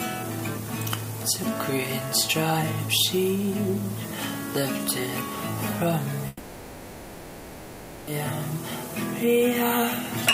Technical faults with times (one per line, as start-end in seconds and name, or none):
6.27-8.09 long network dropout